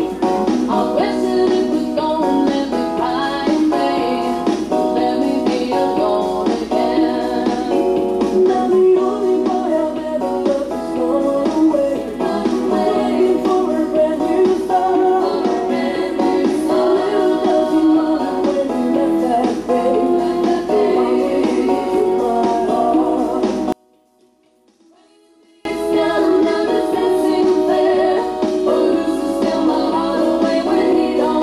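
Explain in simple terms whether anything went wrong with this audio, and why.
From 23.72 to 25.65 s, the sound almost disappears. The likely cause is one channel inverted, so the two sides cancel each other out when combined.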